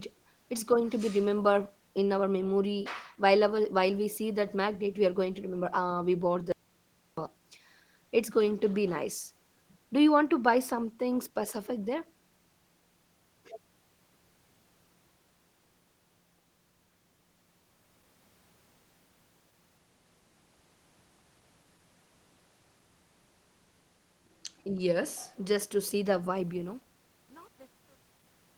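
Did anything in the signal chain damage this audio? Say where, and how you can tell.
Yes. The speech cuts off mid-flow at 6.52 s and returns at 7.17 s, leaving about 0.65 s of silence with even the faint room noise gone. This audio dropout to silence likely came from the input device or driver losing signal while the recorder kept writing zeros.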